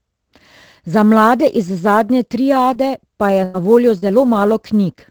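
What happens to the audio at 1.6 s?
At 1.6 s, as throughout the clip, sample clock jitter adds a faint hiss and roughness, roughly 30 dB below the speech and strongest on loud, bright sounds.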